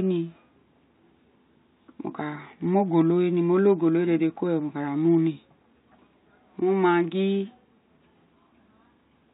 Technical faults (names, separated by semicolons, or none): none